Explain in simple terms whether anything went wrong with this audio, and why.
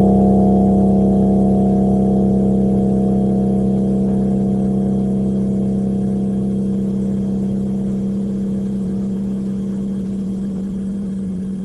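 Something did go wrong, from about 6.74 s to 10.87 s: a call bitrate drop. The connection's estimate of available bandwidth fell, so the encoder was told to describe the sound with far fewer bits. With less data to work with, it coded the audio more coarsely, and for about 4 s the sound comes through rougher and less detailed. Near 10.87 s the bitrate recovers and the fuller detail returns.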